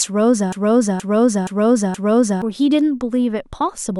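From 0.52 s to 2.42 s the speech snags on a fragment about 0.47 s long and plays it four times in a row, each pass an exact copy butted straight against the last, so the line stutters in a rigid mechanical cycle before moving on. This is a broken-record loop: the player, encoder or stream likely stalled and kept resending the last chunk it held, and whatever should have sounded in those two seconds is gone.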